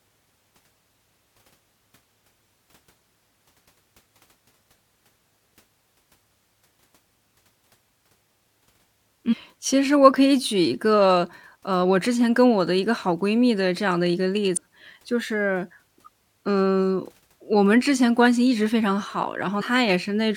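Damaged data in a compressed stream appears in this speech at 9.31–9.34 s, 14.56 s and 19.60–19.62 s. Each time, corrupted bytes make the decoder misread frames and lose sync until it finds the next frame header, leaving a brief chirp, squawk, click or short hole.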